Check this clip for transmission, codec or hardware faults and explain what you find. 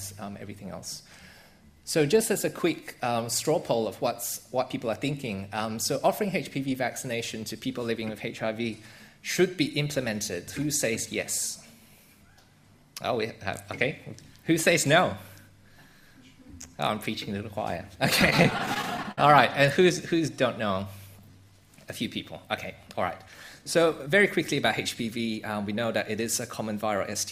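Three network-related timing faults show up in the latter part of the clip, all from the receiver's jitter buffer.

From 18.21 s to 19.18 s the sound catches and drags in twelve brief hitches, the longest about 59 ms, adding up to roughly 179 ms of filled-in audio, about 18% of that stretch. These are repeated stalls (stutter). Packets kept arriving late, the buffer ran dry each time, and the receiver stretched the last sound to bridge each wait. Nothing appears lost, but the flow stumbles.

At 21.21 s to 21.45 s the audio briefly slows to about 82% of normal speed while the pitch holds steady, drawing that moment out by 52 ms. This is a jitter buffer slow-down. With its reserve running low, the receiver repeated single pitch periods or pause fragments several times in a row to rebuild a cushion, lengthening the sound without lowering it.

From 23.59 s to 24.57 s the audio runs slightly fast, about 105% speed at unchanged pitch, so the passage feels faintly hurried. 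This is a jitter buffer speed-up. The buffer was holding more than its target, likely after delayed packets arrived in a bunch, so the receiver trimmed short pitch-period pieces in succession, about 50 ms in total, to bring the delay back down.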